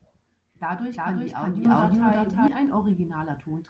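Speech clip with a doubled audio track from 0.90 to 2.48 s: a second full-band copy at roughly equal level trails by around 0.4 s, likely from a second capture path, and starts and stops abruptly. The microphone volume is stepped up twice, by about 9 dB at 1.65 s and about 3 dB at 2.67 s, lifting speech and background together.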